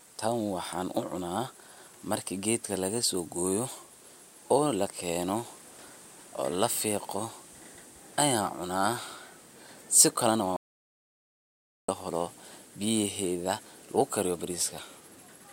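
At 10.56 s the speech cuts out abruptly in an audio dropout to silence lasting 1.32 s, until 11.89 s, likely from the input signal being lost while recording continued. The gap is dead silence with no room tone: a flat waveform and a blank spectrogram column.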